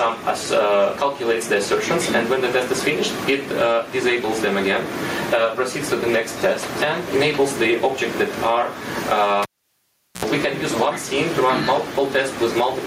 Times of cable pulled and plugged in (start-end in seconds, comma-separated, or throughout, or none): 9.43-10.25